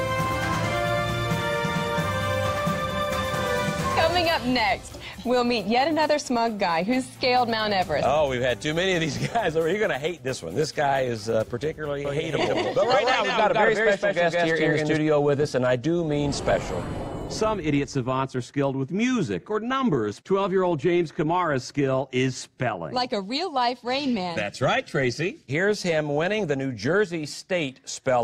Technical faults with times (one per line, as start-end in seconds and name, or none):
12.05-14.97 doubled audio track